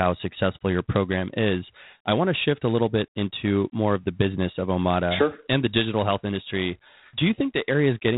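G.726 ADPCM coding runs through the whole clip, at 24 kbit/s. Rather than sending each sample whole, the coder sends a few bits describing how far the speech strays from an adaptive prediction, and at this rate there are too few bits to track it closely. The result is a plainly audible harsh, rasping hiss that rises and falls with the speech level, while nothing above about 3.8 kHz survives, leaving a narrow telephone-band sound.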